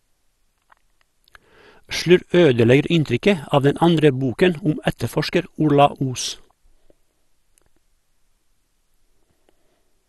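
From start to finish the speech carries MP2 compression damage, plainly audible throughout. Nothing reaches above about 12.2 kHz, so the top is dull, and the remaining sound has a gurgling, granular roughness. That fits MPEG Layer II coding likely run at a low rate, around 64 kbps, where upper sub-bands are shut off and the rest quantised coarsely. The gurgle, rather than swirly, metallic warble, sets it apart from modern transform codecs.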